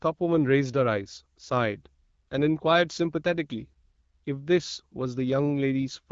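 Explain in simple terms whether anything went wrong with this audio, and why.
Nothing went wrong with this recording. It carries the light, slightly dulled top end of an HD Voice phone call (AMR wideband coding), which stops the sound short of the highest treble, and that is normal for the format.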